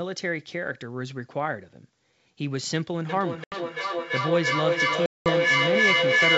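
From 3.09 s to the end, feedback echo between two devices sets in. A second device on the same call plays the far audio, and this microphone picks it up again where no echo canceller can remove it. Repeats about 300 ms apart build up rather than fade, reaching about 6 dB above the direct sound. A spectrogram shows stacked, evenly spaced copies smearing into ringing bands.

At 3.44 to 3.56 s, and again at 5.06 to 5.31 s, packet loss on an ADPCM call cuts holes of 80 ms and 200 ms. These fit roughly four and ten 20 ms packets. The decoder's predictor and step size lose track, so sound returns slightly distorted before settling. The waveform shows flat, hard-edged gaps.

Underneath, the G.722 wideband coding at 64 kbit/s keeps the band up to 7 kHz intact, with no more than a faint hiss.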